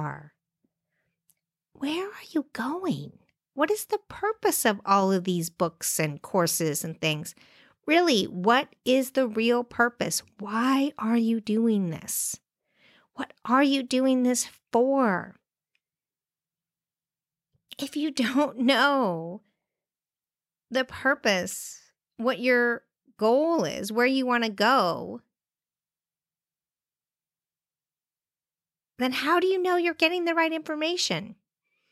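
No audible technical faults here.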